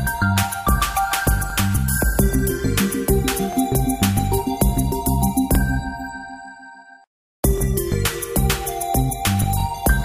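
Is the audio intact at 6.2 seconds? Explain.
Yes, at 6.2 seconds the audio is intact, with no dropout, click, distortion or other fault heard at that moment.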